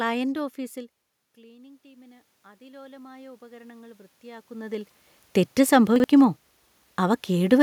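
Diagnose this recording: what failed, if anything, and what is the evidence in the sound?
Call processing stage: automatic gain rising. From 1.44 to 4.96 s, the voice and the room noise swell together by about 13 dB. The input level had dropped by about 24 dB. The gain control compensated slowly, lifting everything at once.

Buffer stage: chunks out of order. Between 5.96 and 6.04 s, a 40 ms chunk plays one chunk late, after the audio that should follow it. Nothing is lost. Three hard joins give a short jumbled moment.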